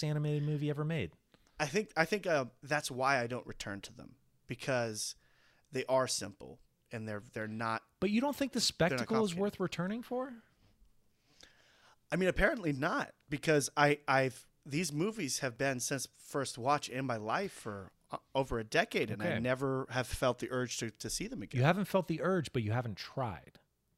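At 3.61 s, 7.6 s and 15.56 s the speech has a tiny hiccup where a sliver of sound just goes missing. That's an overlap between stream segments: two consecutive chunks, which look to be about 2 s long, claim some of the same time, so the player trims the shared bit even though that audio wasn't actually duplicated. A few milliseconds disappear and the waveform steps abruptly at each join.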